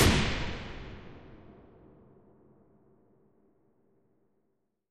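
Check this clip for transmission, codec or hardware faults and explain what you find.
No transmission, codec or hardware faults can be heard anywhere in the clip. The sounds come through without any disturbance from the signal chain.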